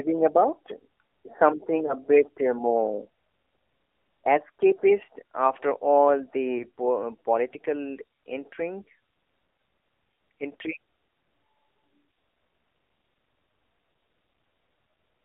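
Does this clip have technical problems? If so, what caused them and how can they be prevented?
Yes. Throughout, the AMR narrowband mobile codec confines the speech to about 300 Hz to 3.6 kHz and gives it a buzzy, synthetic edge, which points to a low-rate mode around 7.4 kbps. A spectrogram shows a hard ceiling near 3.6 kHz with smeared harmonics. A wideband codec or higher-rate mode would prevent this.

Lost AMR speech frames cause brief warbles and dips at 1.86 to 1.95 s, 6.58 to 6.65 s and 10.56 s. Each fits one 20 ms frame failing its checksum, with the decoder reusing the previous pitch and vocal tract settings at lowered gain. These show as short smeared or dimmed patches on a spectrogram and small amplitude dips in the waveform. Stronger radio coverage or a more error-robust codec mode would prevent them.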